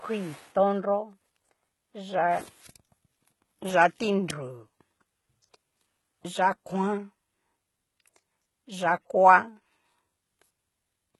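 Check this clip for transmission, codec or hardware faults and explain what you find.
There's one codec problem, and it runs through the whole speech clip. The s sounds come out gritty and metallic, nothing reaches above 11.8 kHz, and the treble sounds synthetic. That's likely HE-AAC compression, rebuilding the top by copying lower bands upward, and the heavy damage fits a bitrate around 16 kbps.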